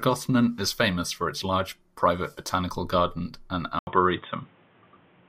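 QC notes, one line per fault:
3.79–5.28 s, input switched to a poorer device: after "private botanical garden and" comes an 80 ms gap, then dull, boxy sound with nothing above 3.8 kHz, a level shift of around 5 dB and a faint new noise floor, likely from a narrower-band microphone or headset call profile taking over.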